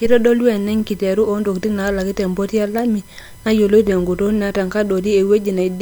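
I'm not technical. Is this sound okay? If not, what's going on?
No, there's a USB whine running through the whole clip: a steady, thin, high-pitched tone built on 1 kHz, strongest up around 11 kHz. A USB connection's regular bursts of power draw are leaking into the audio, sitting faintly behind the speech.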